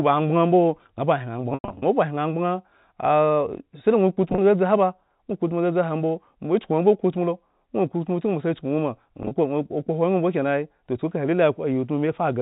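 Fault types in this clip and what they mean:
Packet loss with pitch repetition: Brief held, buzzy moments near 4.30 s and 9.23 s, and a choppier stretch from 1.50 to 1.82 s that fades briefly toward silence. Missing packets were bridged by repeating the last pitch period, with gaps lasting up to 100 ms.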